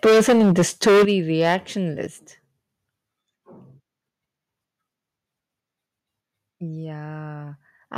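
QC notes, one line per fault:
0.04–1.12 s and 1.41–1.56 s, microphone overload: loud peaks crackle harshly, most severely in the first second, where the signal runs about 14 dB over and nearly a third of samples are flattened, then briefly at about 5 dB over. The likely cause is input gain driving the converter past full scale. Unlike a level drop, this adds distortion.
0.06 s, 1.05 s and 2.07 s, microphone volume stepped down: the voice and background fall together by about 2 dB, then 9 dB, then 5 dB, each in one clean step with no added crackle. This likely comes from call software cutting input gain after detecting clipping.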